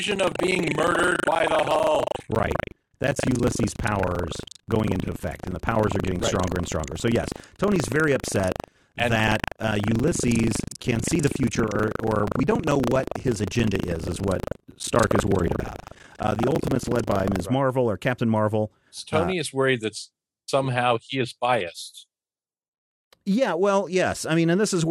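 From the start to 17.44 s, the speech carries buffer tearing. The program filling the playback ring buffer and the hardware reading it have drifted into each other. Each period, about a fifth of the buffer still holds sound from roughly 150 ms earlier. Hard joins sit on both sides of that stale stretch. The result is a steady robotic rattle at 25 Hz, which fits a 40 ms buffer period. It sounds only while speech is present.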